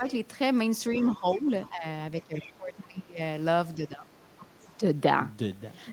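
Right at the start, 0.0 to 0.08 s, the speech dips by around 10 dB for a brief moment. This is speech suppressed in double talk, likely from the echo canceller ducking the talker while the far end was also active.

From 0.92 to 1.84 s the talker dips again by roughly 10 dB, in pieces adding up to under half a second, the same double-talk suppression. Overlapping it, from 0.94 to 1.69 s, a faint second voice comes through about 20 dB below the talker. That is the other side's voice leaking through, likely loudspeaker echo the canceller failed to remove from the microphone.

Another faint leak, about 25 dB down, appears from 2.21 to 2.53 s, again likely residual echo. Overlapping it, from 2.27 to 3.2 s, the speech is pulled down much harder, by about 20 dB, for most of that span. This is deeper suppression in double talk, likely the canceller ducking everything while both sides talk.

From 3.76 to 4.83 s the same suppression returns, again around 20 dB deep for most of the stretch. 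Within it, from 4.15 to 4.76 s, the other side's voice leaks through once more at about 25 dB below the talker, likely uncancelled echo.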